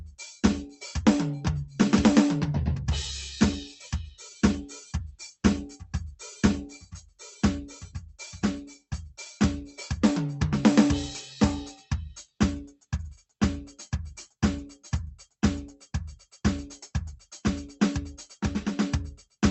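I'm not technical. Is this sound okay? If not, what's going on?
No. Between 6.8 and 7.21 seconds the music is briefly cut by the noise suppressor. That call-cleanup feature mistook part of the music for background noise and turned it down, so for about a third of a second the sound sinks in volume.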